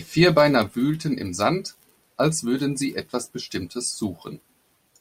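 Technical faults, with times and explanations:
No technical faults are audible anywhere in the speech recording.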